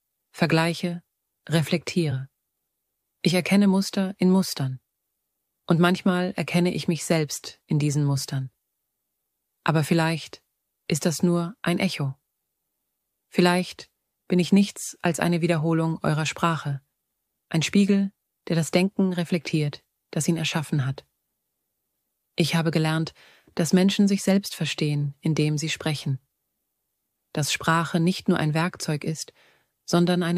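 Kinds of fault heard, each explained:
Nothing here stands out as a fault; the audio just carries on without any glitches, dropouts or odd noises catching the ear.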